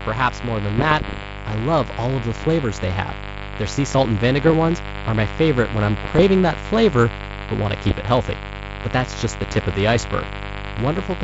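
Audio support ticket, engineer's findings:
Mains buzz, whole clip: steady raspy 50 Hz buzz, about 10 dB below the speech. Switching spikes from a dimmer, rectifier or missing shield, twice per cycle, with harmonics to several kHz; raspier than plain sinusoidal hum.

Bit errors on ADPCM link at 0.78–1.25 s, 2.42–2.49 s (after "love all of the"), 4.43–4.54 s (after "sea salt and"), 6.05–6.23 s (after "my favorite when I'm") and 7.88–7.95 s. Pops and rough bursts with brief level shifts, fitting roughly half a percent of bits flipped. Each error upsets the decoder's step size and predictor, so it rings on for milliseconds rather than clicking once like a dropout. Wideband G.722 coding at 64 kbit/s, no more than faint codec damage.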